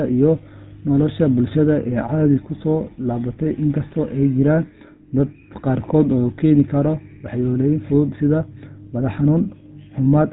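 GSM full-rate codec damage runs through the whole of this speech clip, from the first second to the end at about 10 s. The roughness is plainly audible: a buzzy, gravelly texture laid over the speech. It comes from the codec rebuilding the voice as a vocal-tract filter driven by a sparse, regularly spaced pulse train rather than the real excitation. The band also stops near 3.8 kHz, which fits a 13 kbps GSM full-rate stream.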